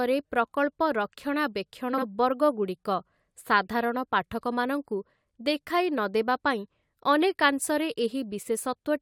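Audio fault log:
1.93–2.03 s, frames out of order: two adjacent blocks of about 43 ms swap places, giving a brief garbled flutter.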